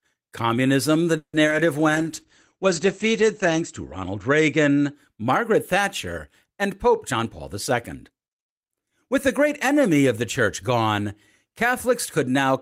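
At 1.17 s the sound stalls for 0.18 s: the last sound carries on as a fading buzz, with about 80 ms of near silence, and then resumes where it left off. This is a call audio freeze, likely from delayed packets draining the jitter buffer. Unlike packet loss, nothing is skipped; the pause simply adds about 160 ms of delay.

Just after that, from 1.47 to 1.50 s and again from 1.50 to 1.53 s, come two back-to-back short concealed packet losses. Each drops about 20 ms of real audio and patches it with a 10 ms extrapolation. They are heard as a quick smear or wobble rather than a pause.

From 1.96 to 5.00 s a call bitrate drop takes the encoder from 32 to 12 kbps. The audio bandwidth narrows from 20 kHz to 8 kHz, so the sound turns muffled and watery. It bottoms out for about 1.65 s before recovering. The dulling stretches across seconds rather than appearing as isolated glitches.

From 7.11 to 9.49 s, ending just before "enemy of the church", a jitter buffer speed-up plays the audio at about 107% speed. 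Short pitch-period slices, roughly 150 ms in total, are cut out to shrink an overfull buffer. The pace sounds hurried while the pitch stays unchanged.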